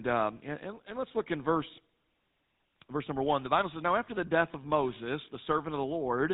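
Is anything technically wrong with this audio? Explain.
Yes. Throughout the speech, the signal has been through the GSM full-rate codec, and the damage is plainly audible. The codec reduces speech to a vocal-tract filter driven by a sparse train of regularly spaced excitation pulses, discarding most of the fine detail. The level of damage fits a bitrate of about 13 kbps. Nothing above 4 kHz survives, so the speech sounds dull and narrowband, with a buzzy, gravelly roughness.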